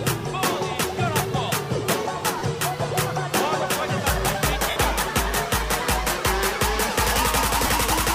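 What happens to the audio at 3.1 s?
Nothing goes wrong at 3.1 s: the audio plays through that moment intact, with no dropout, click, distortion or other fault.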